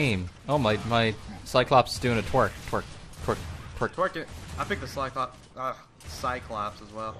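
The sound is dull and gurgling, with grainy distortion throughout. Upper bands flicker out. This is likely MP2 compression, at a low bitrate around 80 kbps.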